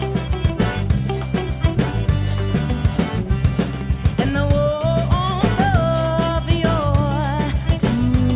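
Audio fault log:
No faults detected in the audio.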